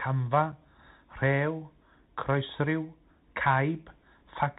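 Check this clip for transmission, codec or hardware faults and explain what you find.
Two faults are present: narrowband Bluetooth codec damage across the whole speech clip, and one brief dropout.

Throughout, the speech sounds muffled and scratchy, with s sounds gritty, louder bright passages breaking up, and a granular hiss underneath. This is the Bluetooth CVSD headset codec. Its one-bit up-or-down coding, which fits a 64 kbps link, cuts everything above 4 kHz, and its adaptive step can't keep pace with loud high content.

At 0.52 s there is a tiny hole of about 7.5 ms with hard edges that can click, after which the sound comes back quieter for a moment. This is unconcealed Bluetooth headset packet loss. Roughly one voice packet between headset and phone failed to arrive, and silence or an idle pattern was played instead of any smoothing repair.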